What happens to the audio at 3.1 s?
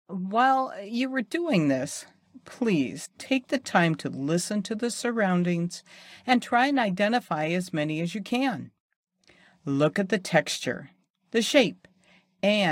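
Compressed frames skipped at 3.04–3.06 s: about three frames are missing, so the speech jumps forward about 70 ms and resumes at "take the time to". On the spectrogram, formant tracks break abruptly.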